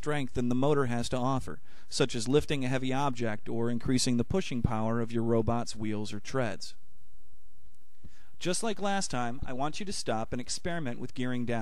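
A repeated buffer at 6.26 s puts a brief buzz into the audio. New samples did not reach the output in time, so the device replayed the last block of roughly 2.9 ms four extra times, with a hard join at each repeat. With a block that short, the repeats fuse into a click-like buzz of about 11 ms rather than a stutter, which fits a 128-sample buffer. Nothing seems to be lost from the audio, which resumes where it left off.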